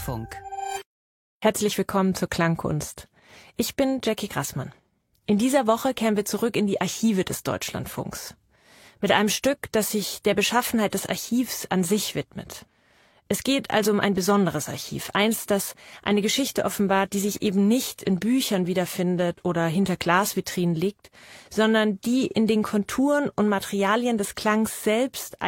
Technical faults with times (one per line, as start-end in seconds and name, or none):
none